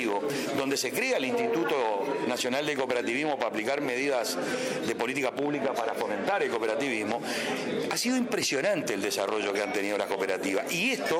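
No technical faults are audible.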